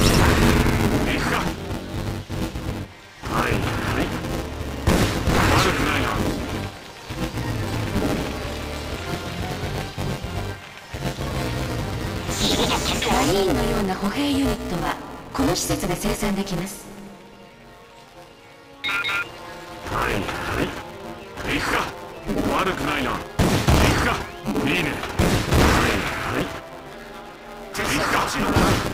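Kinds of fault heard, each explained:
Buffer tearing: writer and reader cross each period, so about a third of each buffer is stale audio, giving a 188 Hz rattle that fits a 256-sample buffer.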